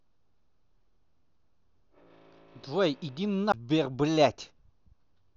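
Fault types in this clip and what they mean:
CD skip: A knock or a flaw in the disc threw the laser off its track onto another turn of the spiral, so playback lost its place. At 3.52 s the speech drops out for a very short mute, roughly 15 ms, heard as a small tick. When it resumes, the speech carries on from a different point on the disc, a whole number of disc turns away, so the flow jumps abruptly rather than continuing smoothly.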